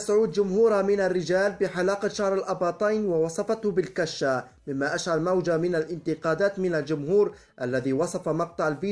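No technical faults are audible.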